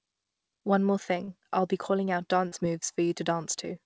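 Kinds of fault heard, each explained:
Short concealed packet loss: twice, about 40 ms of the call audio failed to arrive at the decoder in time, and the receiver papered over each gap by extending the preceding sound, pitched or noise-like, before easing back into the real signal. It shows as brief smears at 1.24 to 1.31 s and 2.48 to 2.55 s, heard against the call path's band limit with nothing above 8 kHz.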